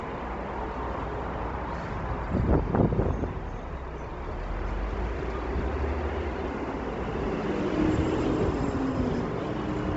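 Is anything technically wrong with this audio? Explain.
Yes. Throughout the clip there is heavy codec damage, likely from Bluetooth LC3 compression. Nothing is present above 7.8 kHz, and the upper band has a grainy, noise-filled texture. That fits a low bitrate near 24 kbps, where the encoder discards high-frequency detail and substitutes shaped noise.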